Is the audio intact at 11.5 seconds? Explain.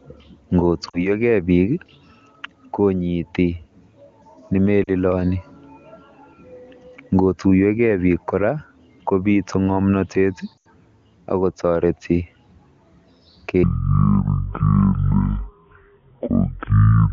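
Yes, the speech at 11.5 seconds is intact, carried cleanly by the AMR wideband (HD Voice) codec at its top rate of 23.85 kbit/s with no audible fault at that moment.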